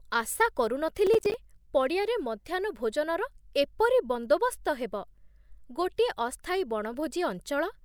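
From 1.07 to 1.34 s the speech carries processor overload crackle. The processor repeatedly missed its buffer deadlines, about ten times in that span, which fits buffers of around 10 ms. Each miss left a hard-edged gap of silence, and together they sound like a gritty, tearing crackle.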